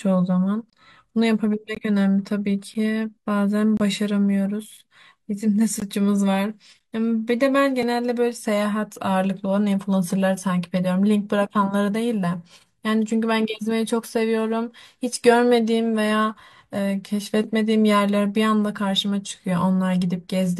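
It's a speech clip with a gap between stream segments at roughly one-second intervals: short hard-edged silences at 0.70 to 0.73 s, 1.75, 2.74, 3.77 to 3.80, 4.77, 5.80, 6.79 and 7.83 s, lasting from about 3 to 27 ms. The pattern fits 1-second segments whose timestamps don't quite butt together, so the player pads each seam with silence. Nothing is actually dropped from the speech.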